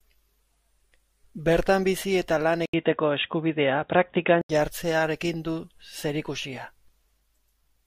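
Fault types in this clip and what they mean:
Input switched to a poorer device: from 2.66 to 4.49 s the speech turns dull, likely from a narrower-band microphone taking over. The spectrogram is empty above 3.8 kHz. The waveform shows an 80 ms gap, a level shift of about 5 dB and a faint new noise floor.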